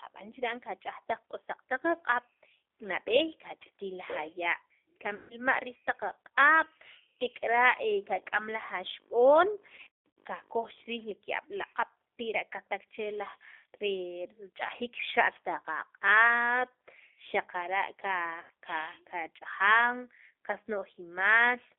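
Speech carried over a G.729 codec (the G.729A variant at 8 kbit/s) throughout, band-limited to roughly 300 Hz to 3.5 kHz, with plainly audible rough, synthetic texture from the low-rate reconstruction of each frame. VoIP packet loss concealed by the speech codec occurs at 5.15–5.35 s (150 ms lost), 9.75–10.16 s (330 ms lost in scattered bursts over 420 ms, longest run 150 ms) and 18.41–18.51 s (90 ms lost). In each gap the decoder extends the last sound into a fading buzzy tone or coloured noise, which fits 30 ms packets.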